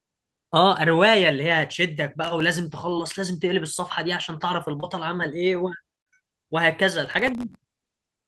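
From 2.24 to 2.45 s the speech breaks into processor overload crackle. The system could not finish its audio buffers on time, and the buffers were very short, under a millisecond each. Around ten deadlines were missed in quick succession. Each miss dropped in a tiny hard-edged gap of silence, and together they form a gritty tearing over the sound. Unlike a single dropout, it is a dense cluster of clicks that stops once the load eases.

At 2.89 to 2.95 s there is a short concealed packet loss. About 20 ms of audio never arrived, and the receiver filled roughly 17 ms by extending the preceding sound, with a little extra time stretched in. It is heard as one brief smear or wobble with no hard edges, which sets it apart from the clicking tear of the crackle. A second one at 4.80 to 4.84 s covers about 20 ms with a 21 ms fill and sounds the same.

From 7.06 to 7.78 s the overload crackle returns for much longer, with dozens of missed buffers, each a tiny silent gap. 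The result is a sustained, rough tearing that lasts nearly three-quarters of a second.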